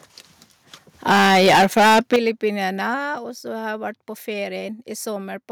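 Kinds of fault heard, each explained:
Microphone overload: From 1.08 to 2.16 s the loudest speech peaks are flattened against the converter's ceiling, driven about 14 dB too hot with roughly a fifth of samples clipped. The harsh crackle is distortion in the sound itself, likely from excessive input volume.
Microphone volume stepped down: Speech and background together drop abruptly at 1.12, 2.16 and 3.18 s, by about 2, 11 and 4 dB. This is likely call software cutting the input volume after the overload. Loudness changes in clean steps, with no added crackle.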